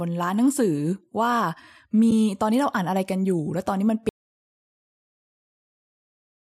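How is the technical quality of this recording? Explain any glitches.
The recording has two clear faults: a brief soft gap early on, and a cut to silence that runs to the end.

AAC frame loss with muting, at 2.11 s: one frame of the low-delay AAC stream, about 10 ms, failed to arrive, and the decoder filled it with zero spectrum instead of guessing. Because neighbouring frames overlap and crossfade, the sound fades out and back in across that short span. The result is a brief dip in the speech.

Audio dropout to silence, from 4.09 s to the end: the speech stops abruptly mid-flow and is replaced by silence, with no room tone or background hiss underneath. This most likely means the input signal was lost, through a disconnected device, a failed link or an accidental mute, while the encoder kept writing silence. Whatever followed at that point is gone, and the silence lasts until the clip ends.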